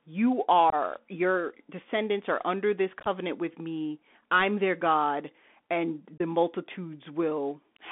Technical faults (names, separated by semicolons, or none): Bluetooth CVSD headset codec; unconcealed Bluetooth headset packet loss